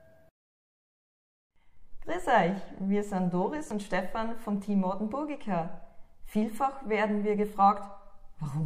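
Nothing in the signal stands out as a technical fault: there is no disturbance that points to a problem in how it was captured, processed or delivered.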